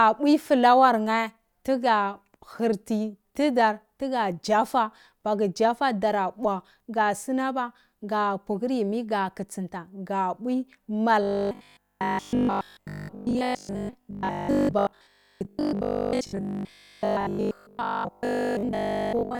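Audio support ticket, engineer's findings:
Robotic sound from repeated short buffers, 11.23 s to 19.39 s, through end of clip. Speech collapses into a rigid metallic buzz at 50 Hz that still loosely tracks the speech. Likely cause: an audio input buffer running starved, the playback stage looping the last 20 ms and skipping most of the real audio. Spectrogram: evenly spaced harmonics at 50 Hz multiples, flat and unbending. Waveform: identical 20 ms cycles repeating.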